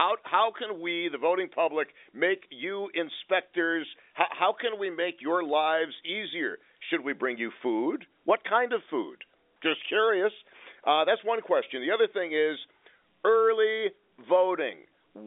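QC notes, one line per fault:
Nothing stood out on listening; the speech carries the narrow band of an ordinary G.711 telephone line, with nothing heard above about 3.7 kHz.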